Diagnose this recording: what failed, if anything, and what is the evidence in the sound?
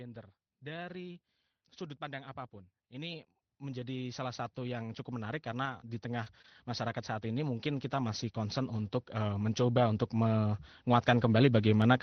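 From just after "pandang apapun" at 2.96 s to the end at about 12 s, the speech and the background noise swell together, steadily and without any step. This is automatic gain rising in the call processing stage. The automatic gain control judged the input too quiet and raised its gain gradually. Because it scales the whole signal, the room noise is pushed up along with the speaker, so the noise floor climbs in step with the level.

Around 5.65 s, 5.69 s, 6.26 s, 6.44 s and 6.48 s there are brief rough, grainy patches, each lasting about 20 ms, with no silence in them. These are lost packets rebuilt from error correction, a network fault that the decoder recovered from. Each missing Opus packet was replaced by the lower-bitrate copy carried inside the packet that followed it. Playing that coarser copy keeps the audio continuous but adds extra coding noise. The call path's roughly 6 kHz bandwidth already limits the top end.

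From 6.24 to 6.28 s and from 6.42 to 6.46 s the sound smears and wobbles briefly instead of moving on cleanly. This is short concealed packet loss on the network side. About 20 ms of audio missed the jitter buffer each time. The decoder extended the preceding sound, pitched if voiced and as shaped noise if not, then blended back. Error-correction copies fill the last part of each span.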